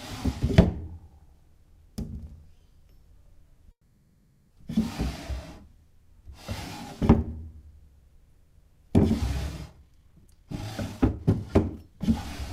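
From 3.71 to 4.53 s the sound stops and is replaced by a fading buzz or hiss, ending in brief silence. This call audio freeze likely came from delayed packets emptying the jitter buffer. From 9.70 to 12.01 s, a jitter buffer speed-up plays the sound at 129% speed with unchanged pitch. Repeated removal of short pieces trims roughly 0.7 s.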